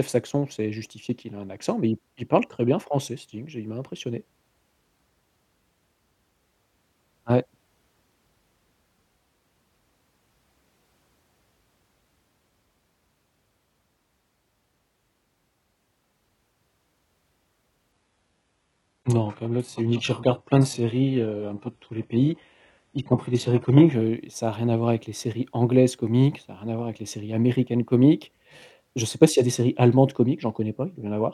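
An adaptive stream at a lower bitrate plays from 17.92 to 23.92 s, ending just before "heu ça a rien". With the connection slowed, quality switches suddenly and gaplessly: nothing sounds above 11.5 kHz and codec artefacts rise, which fits a 12 kbit/s HE-AAC fallback.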